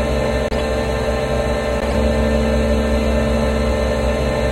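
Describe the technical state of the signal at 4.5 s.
At 4.5 s the signal is intact, with no dropout, clipping, glitch or other fault audible at that moment.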